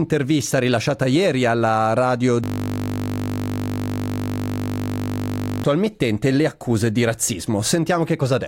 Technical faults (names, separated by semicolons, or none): system hang loop